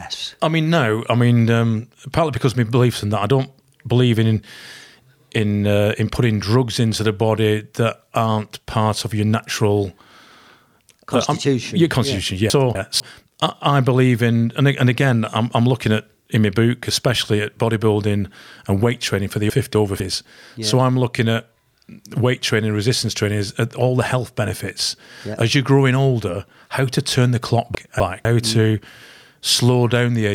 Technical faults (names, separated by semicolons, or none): chunks out of order